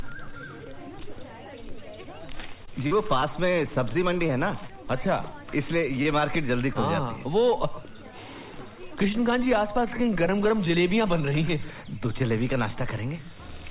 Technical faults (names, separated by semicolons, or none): jitter buffer slow-down; scattered short gaps; short stall from a late packet; short concealed packet loss